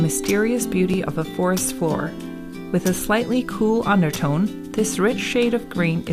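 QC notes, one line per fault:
0.94 s: overlapping chunks. At this join the audio repeats a sliver of about 6.5 ms, because the chunk starting here begins slightly before the previous one ended, so the overlap plays twice. The section is 2.0 s long. Doubling so short a span causes a small discontinuity in the waveform rather than an audible echo, so it comes across as a brief click or tiny stutter at that point instead of a clear repetition.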